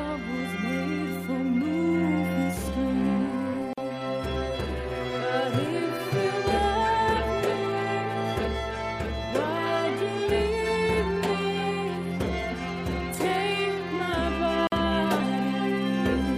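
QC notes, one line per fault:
3.73–3.78 s and 14.67–14.72 s, gap at a join of encoded pieces: the audio was encoded as separate pieces and joined without trimming, so the encoder's start-up delay and last-frame padding remain at each seam. The result is a dropout of about 44 ms and then about 49 ms in otherwise continuous sound. The edges are smeared by the codec, and the sound resumes exactly where it broke off.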